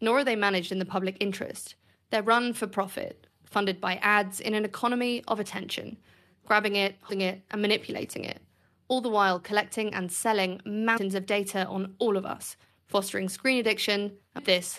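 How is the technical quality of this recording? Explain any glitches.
The recording has three glitches, all compressed frames skipped. At 7.08 s, between "of attention grabbing it" and "it and manipulating it", and at 10.96 to 10.98 s, between "while collecting and selling" and "of data on all", about 150 ms of audio vanishes. At 14.38 s roughly 300 ms goes. The decoder never played some frames, which fits jumps of whole 23.2 ms frames. Unlike a dropout, there is no silent gap.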